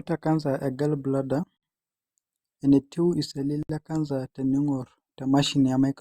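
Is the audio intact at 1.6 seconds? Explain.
No. From 1.57 to 1.63 s the speech drops out for about 60 ms. This is a gap at a join of encoded pieces, repeating every 2.0 s. Each piece went through the encoder separately, and the encoder's start-up delay and the padding of its final frame were left in place when the pieces were joined. The result is a short silence with smeared edges, after which the speech resumes exactly where it stopped.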